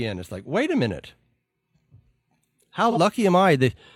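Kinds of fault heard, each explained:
AAC frame loss with concealment: at 2.91 to 2.98 s a brief smeared, noisy patch interrupts the speech. About 43 ms of audio went missing, which fits a single lost AAC frame, and the decoder filled the gap by reusing the last good spectrum with altered phase.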